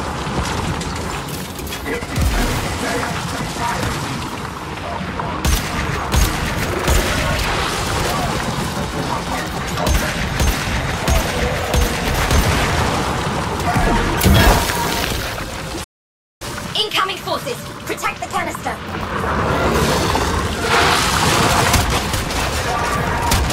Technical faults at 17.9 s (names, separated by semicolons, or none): catch-up at higher speed